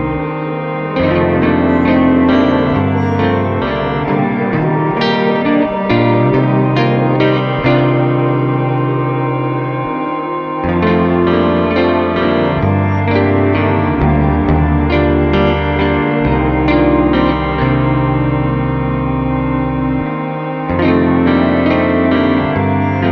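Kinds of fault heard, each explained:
No technical fault can be heard anywhere in the signal.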